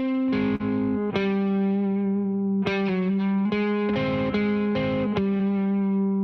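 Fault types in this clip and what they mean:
Short concealed packet loss: twice in this music a slice of the stream arrived too late to decode, once around 0.55 to 0.61 s with about 40 ms missing and again near 5.37 to 5.41 s with about 20 ms gone. The receiver papered over each gap by stretching out the sound it had just played and then fading back into the real signal, so you hear a quick smear or wobble rather than a clean dropout.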